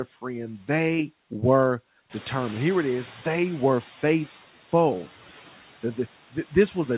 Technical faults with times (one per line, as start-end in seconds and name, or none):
0.00-6.97 noise suppressor artifacts
2.09-4.33 noise suppressor catching up